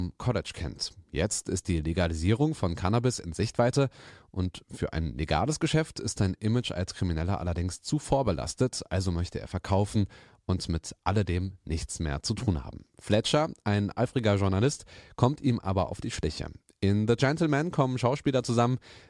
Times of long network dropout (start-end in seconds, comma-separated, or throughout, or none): none